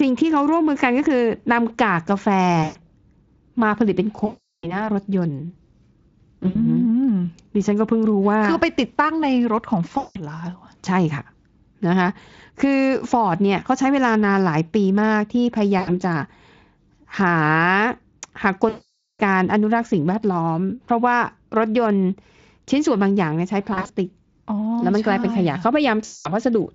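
VoIP packet loss concealed by the speech codec breaks the speech at 2.63–2.79, 4.25–4.89, 6.47–6.56, 9.97–10.17, 15.79–15.92, 18.69–19.21, 23.73–23.94 (short scattered losses) and 26.05–26.35 s. The Speex decoder repeats its last pitch and filter at falling gain, so these are not silent dropouts: the voice smears into a fading buzzy tone or coloured noise, lasting longest in the 4.25 s and 18.69 s gaps. It stays weakened briefly after each gap.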